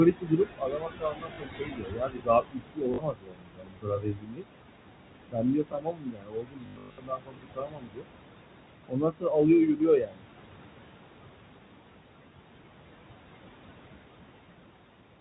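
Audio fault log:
Throughout: noise suppressor artifacts. The background is pulled down by about 21 dB between phrases and swells back under speech.
0.12–4.47 s, 5.31–8.07 s, 8.86–9.49 s, 9.65–10.26 s: speech cut by the noise suppressor. Soft consonants and quiet endings are mistaken for noise and dropped by up to about 22 dB. This covers roughly four seconds in the first stretch, three in the second and half a second in each of the last two, so they sound swallowed.
1.34–1.38 s, 2.94–2.98 s, 6.66–6.98 s, 9.78 s: packet loss with last packet repeated. Lost audio is filled by replaying the previous fragment, so runs of repeats buzz robotically. The short gaps lose 40 ms, 40 ms and 20 ms, which fits 20 ms packets and a 50 Hz buzz. Between 6.66 and 6.98 s, 280 ms are lost across 320 ms, with a longest run of 120 ms, giving a robotic stutter.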